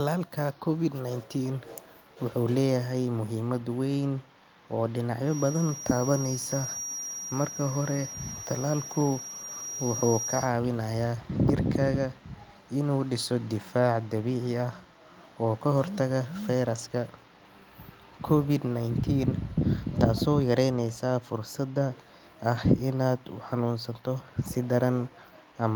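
Speech clip. A feedback whistle near 5.7 kHz sits behind the voice from 5.22 to 10.53 s, roughly 10 dB below it. A loudspeaker-to-microphone loop hovering at the edge of feedback is the likely cause.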